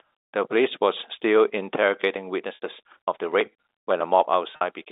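At 2.55 s the speech drops out for about 70 ms. The receiver fills the gap by repeating the last pitch period, fading it toward silence before the signal resumes with a short cross-fade. A second, 50 ms loss at 4.56 s gets the same treatment and sounds like a brief buzzy hold. Both are packet loss with pitch repetition, heard through narrow telephone-band G.711 coding.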